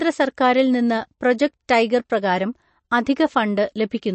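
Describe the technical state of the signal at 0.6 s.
At 0.6 s the speech carries the same MP3 compression damage heard throughout: nothing above 8.3 kHz, plus watery, swirling texture, likely from a starved bitrate around 37 kbps.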